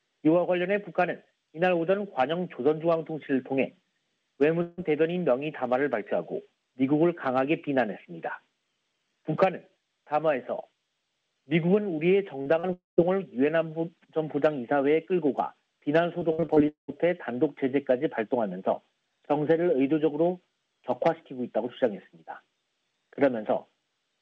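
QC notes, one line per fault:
4.62–4.79 s and 12.73–12.99 s, long network dropout: sound stops arriving and the gap is filled by stretching the last sound into a fading buzz, most likely because the network stalled. The first gap, about 0.16 s, is fully bridged. The second, about 0.24 s, fades to silence for roughly the last 0.16 s. The waveform shows a smooth decaying tail and then a flat stretch, and the spectrogram shows repeated smeared bands before the real audio resumes with the missing part skipped.
12.41–12.48 s and 12.60–12.65 s, short concealed packet loss: each hole is about 40 ms, just before the longer dropout. The decoder covers it by extending the preceding sound and crossfading back, which is heard as a quick smear or slight wobble, with any short transient there softened or gone. On a spectrogram each shows as a brief patch of copied, blurred harmonics or noise. In the waveform the envelope looks oddly regular.
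16.19–16.90 s, repeated packet loss (robotic sound): six gaps land in quick succession, the longest about 0.2 s, so nearly half of this 0.7 s stretch is synthesized fill. Each patch repeats the previous sound before the next gap arrives, producing a choppy sound with pieces missing. The spectrogram shows a stutter of short repeated blocks with hard seams. Throughout the clip, like this stretch, there is nothing above 8 kHz, which fits a wideband call codec.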